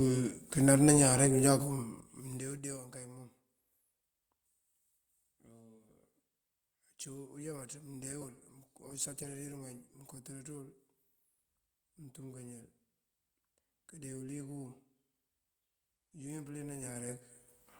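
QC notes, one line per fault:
8.23–10.09 s, call bitrate drop: speech turns rougher and more coarsely coded for about 1.8 s before clarity returns. This points to the bandwidth estimate falling and the encoder cutting its rate from roughly 32 to 18 kbps, then recovering.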